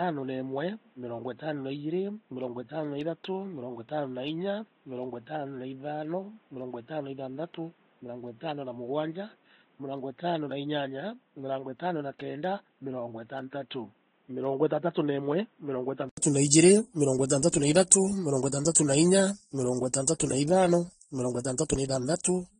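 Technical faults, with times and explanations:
Throughout: transcoding between lossy codecs. Nothing comes through above 9.7 kHz, and two kinds of compression smear sit on top of each other. That fits a low-bitrate AAC encode that was likely re-encoded to Vorbis, with the second codec spending its bits on the first one's artefacts.
0.0 to 16.17 s: input switched to a poorer device. Up to here the sound is dull and boxy, cut off at 4 kHz, about 5 dB quieter, and carrying background noise roughly 35 dB down. An 80 ms gap comes before "na iijirimirongo itantatu na", and then it opens up. That's likely a switch from a poorer input device back to the better one.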